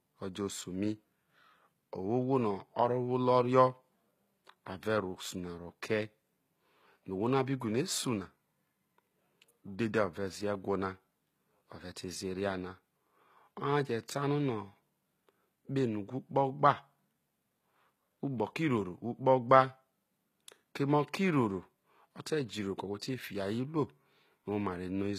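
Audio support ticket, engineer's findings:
Throughout: treble gritty and metallic, s sounds lispy, nothing above 14.9 kHz. Likely HE-AAC compression at a bitrate sounding near 20 kbps. Treble rebuilt from copied lower bands, so harmonics misalign across crossover. Spectrogram: hard ceiling at 14.9 kHz, smeared repeated texture above crossover.

23.00 to 23.02 s: pre-echo, a hiss for about 22 ms ahead of a sharp onset, which sounds softened. The codec block spreads noise sized for the loud attack into the quiet lead-in. Waveform: low noise smear before the transient. Spectrogram: broadband haze preceding the onset.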